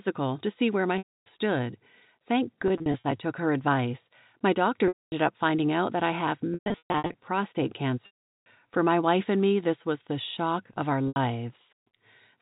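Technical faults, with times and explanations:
0.98–1.26 s, 2.68–3.04 s, 4.88–5.12 s, 6.54–7.14 s, 8.06–8.46 s and 11.08–11.16 s: packet loss with pitch repetition. The narrowband telephone sound drops out in these spans, and the gaps fit 20 ms packets. The receiver repeats the last pitch period to fill each hole. The 80 ms loss and the short runs inside the broken-up spans at 2.68 and 6.54 s sound like a brief held, buzzy tone. The solid losses of 240 to 400 ms fade out over about 50 ms into silence. Speech then returns through a short cross-fade.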